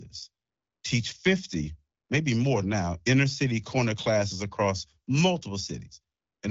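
No technical faults present.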